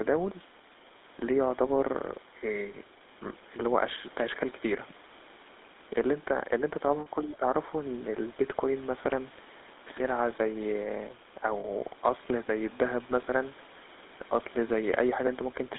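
Across the whole clip the GSM full-rate codec leaves a buzzy, gravelly roughness, and the line passes only about 250 Hz to 3.7 kHz. This fits a 13 kbps GSM stream. Unlike plain band-limiting, the grain comes from pulse-driven excitation, not just missing treble.

From 7.00 to 7.07 s, lost GSM frames leave a 60 ms stretch where the sound freezes into a rough, metallic ring. The decoder is repeating the last good frame. Unlike a dropout, it rings rather than going silent.

From 7.22 to 7.45 s the speech dips by roughly 15 dB. This is likely speech suppressed in double talk: the echo canceller turns the talker down while the far side speaks. Unlike a frame loss, nothing rings, and the level simply sags.

At 11.60 to 11.65 s, a second loss of GSM frames produces the same 40 ms metallic hold.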